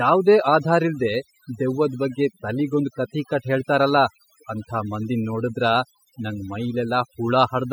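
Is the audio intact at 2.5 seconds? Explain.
No. At 2.5 seconds, overdone noise removal is present, as it is throughout. Frequency bands near the noise estimate are cut away, leaving twinkling specks.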